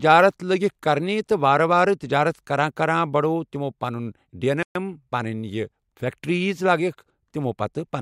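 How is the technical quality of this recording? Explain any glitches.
The recording has one clear glitch, a playback stall at 4.63 s to 4.75 s, just after "بڑووُکھ تِمو پَنٕنۍ ڈین". The player most likely ran short of data or had its thread held up, so for about 125 ms nothing reached the output. The speech stops abruptly mid-flow and the line goes silent for that eighth of a second before the audio resumes, which leaves a noticeable hole in the rhythm of the sentence.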